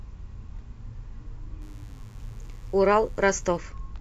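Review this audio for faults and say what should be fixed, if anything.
Mains buzz runs from 1.62 to 3.58 s, a steady, raspy buzz well below the speech. Sharp interference spikes enter the signal twice per 50 Hz mains cycle, so the buzz carries a dense stack of 50 Hz harmonics reaching up to several kilohertz. To prevent it, keep audio cables shielded and away from dimmers and switching supplies, and fix any ground loop in the recording chain.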